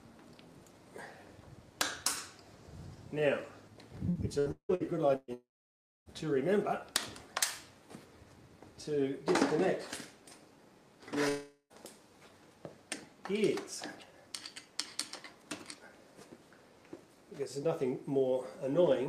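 From 4.09 to 5.31 s there's repeated packet loss with a robotic sound: five gaps, the longest 174 ms, get patched by stretching the last sound, so 38% of that span is choppy fill. At 5.34 to 6.09 s, and again at 11.29 to 11.73 s, there's a likely long network dropout. The last sound is carried over and then goes silent, for 600 ms the first time and 70 ms the second, and the audio resumes without the missing part.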